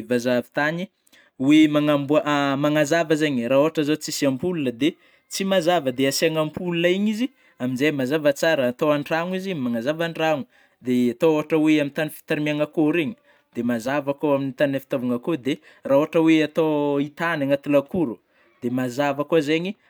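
Speech, with no technical faults to report at any point in the clip.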